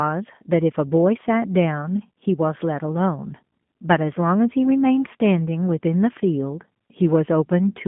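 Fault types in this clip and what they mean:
G.729 codec, throughout: the sound has been squeezed through a low-rate telephone speech coder that rebuilds it from a vocal tract filter, a pitch predictor and a few pulses per frame, which fits an 8 kbit/s G.729A stream. The line band runs from about 150 Hz to 3.5 kHz, so the speech is thin and muffled, and the coding damage is plainly audible as a rough, slightly synthetic quality.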